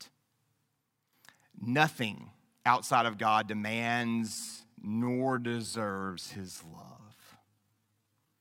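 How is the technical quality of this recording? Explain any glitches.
The recording has one clear fault, a time-stretched section. From 3.77 s to the end, speech slows to about 0.57 times its pace and drags. This is likely software stretching by repeating short pieces. Unlike slowed playback, the pitch stays unchanged.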